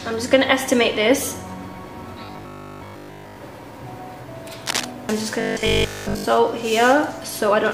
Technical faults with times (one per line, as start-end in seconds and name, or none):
2.25-3.37 robotic sound from repeated short buffers
4.66-4.85 cable scratch noise
5.41-6.25 robotic sound from repeated short buffers